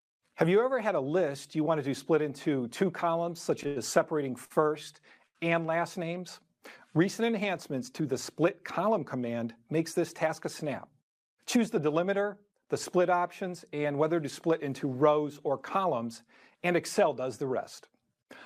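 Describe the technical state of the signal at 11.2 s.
At 11.2 s the signal is in a jitter buffer speed-up (10.27 to 11.86 s): short pitch-period slices, around 70 ms in total, are cut to run about 4% faster. Speech keeps its pitch, unlike a resampling error.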